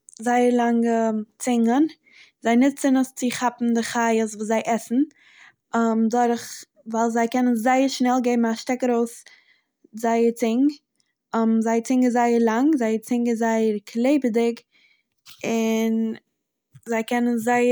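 No technical faults can be heard anywhere in this speech recording.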